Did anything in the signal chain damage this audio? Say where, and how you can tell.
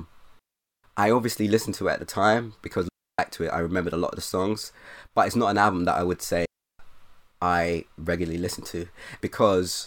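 Yes, a digital wireless dropout in the radio link. Clean near-silent holes sit at 0.39–0.84 s (before "I obviously listened to"), 2.89–3.19 s (after "at the time because") and 6.45–6.79 s (after "album that I would"). When data loss overwhelms the link, the receiver mutes behind a very short fade. Analogue wireless would leave noise bursts around the holes, and these have none.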